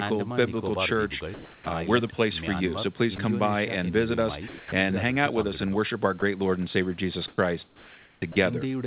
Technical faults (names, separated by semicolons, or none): comfort noise in place of the background; onset clipped by the voice detector; sound dropped by the voice detector; sound chopped by the voice detector